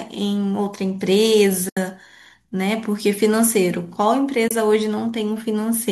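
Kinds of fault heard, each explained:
AAC frame loss with muting: the decoder zeroes lost frames, leaving soft-faded silent gaps, 80 ms long at 1.69 s and 30 ms long at 4.48 s.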